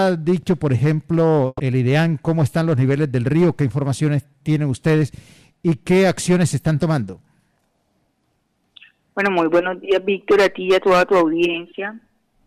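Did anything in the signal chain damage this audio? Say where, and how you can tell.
Yes, at the network stage: a burst of packet loss from 1.47 to 1.61 s. The receiver concealed about 120 ms by extending and fading the last sound, then left about 30 ms of silence. On a spectrogram, frozen, dimming bands give way to a blank strip before the audio jumps ahead.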